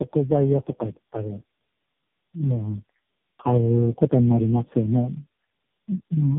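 From start to finish, the call behaves like a case of tandem speech coding: the speech has been decoded and coded again across several links, with roughly four speech coders in a row, which fits a chain including AMR-NB narrowband stages down to about 5.9 kbit/s. Each stage compounds the last one's damage, so the speech sounds rough, muffled and warbly, and it is band-limited, with nothing above 3.8 kHz.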